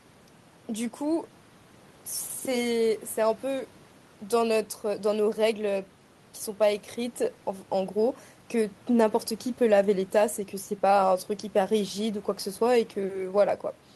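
No technical faults are audible.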